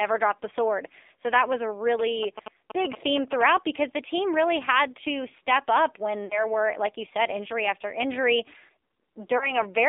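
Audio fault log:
throughout: AMR narrowband mobile codec. The speech sits in a band from about 300 Hz to 3.7 kHz with nothing above, and it has the buzzy, synthetic edge of a vocal-tract model rebuilding the voice from a few pulses per subframe. The plainly audible damage fits a low AMR-NB mode near 7.4 kbps. Plain band-limiting would only dull the sound; here the voice itself is reshaped, and any noise around it warbles.
1.99–3.42 s: GSM signalling bursts. For about 1.4 seconds a galloping dit-dit-dit pattern of short buzzes runs over the speech, at roughly 10 dB below it. The buzz repeats at 217 Hz, the frame rate of a nearby 2G phone's radio bursts, which the audio circuit rectifies into sound while the phone signals. Mains hum is steady and sits at 50 or 60 Hz; this comes in irregular clumps.
6.26–6.46 s and 9.38–9.57 s: lost AMR speech frames. At 6.26 s the sound smears and dips for about 40 ms, which fits two frames failing their checks, and at 9.38 s a single 20 ms gap gives a briefer warble. 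Each time the decoder repeats the last good pitch and vocal-tract settings at falling gain, so the sound stretches and fades rather than clicking. The speech then returns weak or rough for a moment, unlike a clean dropout.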